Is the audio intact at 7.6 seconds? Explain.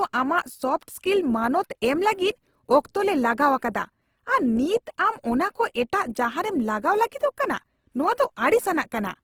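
No. At 7.6 s, as throughout, the speech sounds rough and grainy, likely from Opus compression filling bit-starved bands with noise, consistent with roughly 16 kbps.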